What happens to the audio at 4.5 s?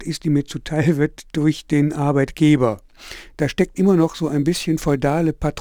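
At 4.5 s you're inside a stretch of crude rate conversion that runs from 2.72 s to the end of the clip. The rate was changed by just picking the nearest sample, which fits a 48 kHz to 44.1 kHz conversion, with no filtering. That drops samples in a repeating pattern and creates shifted, inharmonic copies of the speech, roughly 30 dB down. You hear it as a gritty fizz riding on the louder and brighter parts of the speech.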